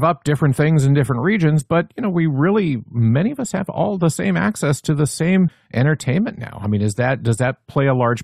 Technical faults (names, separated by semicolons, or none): CD skip